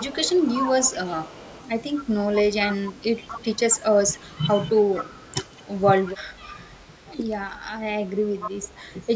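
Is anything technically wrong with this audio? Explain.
Yes, there are two problems, both pointing at the far end of a call running on a loudspeaker.

The first is an echo leak across the whole clip, from 0 to about 9.2 s. A faint delayed copy of the speech trails the original by about 237 ms, sitting roughly 15 dB below it. It sounds like a ghostly doubling behind the talker. The likely cause is an echo canceller that didn't fully remove what its microphone picked up from the loudspeaker, so the residue got sent back down the line.

The second is speech suppressed in double talk, at 2.18–2.28 s, 3.13–5.39 s, 6.13–6.39 s, 7.47–7.74 s and 8.54–8.84 s. In those spots the talker's level sags or drops out in chunks, by a modest amount in the short ones and quite heavily in the long 3.1–5.4 s stretch. The likely cause is that both sides were talking at once, and the canceller couldn't tell the talker from the echo, so it ducked everything. 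The band topping out at 8 kHz is just the call path and isn't part of either fault.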